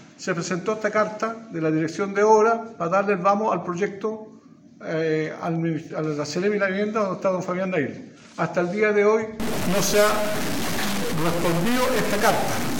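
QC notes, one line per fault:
9.40 to 12.80 s, stuck bit: harsh, buzzy distortion to the end, with noise filling quiet moments. Likely one converter bit stuck, a step of roughly -20 dBFS.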